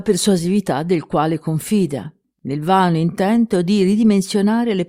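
No technical faults can be heard anywhere in this clip.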